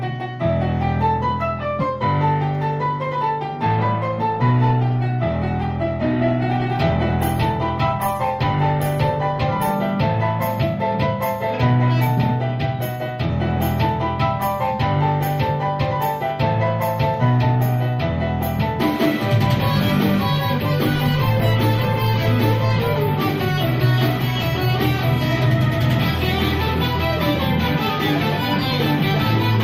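From 4.33 to 9.81 s, and again from 20.85 to 23.05 s, a call bitrate drop makes the sound coarse and watery. The texture points to the encoder falling from about 48 kbps to around 17 and then 16 kbps. In the first stretch the top end also narrows from 20 kHz to 12 kHz, dulling the sound. Packet loss leaves gaps or clicks, but here the degradation is continuous and lifts once the rate recovers.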